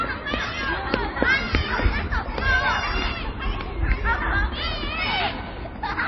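From start to finish the sound is dull and watery, with nothing above about 5.8 kHz and plainly audible swirling. The likely cause is heavy MP3 compression, consistent with a bitrate near 24 kbps, where the encoder cut the treble and let weak frequency components flicker between frames.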